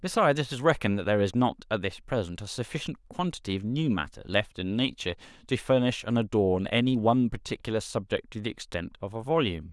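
Nothing to flag in this speech recording; no technical faults turn up anywhere in it.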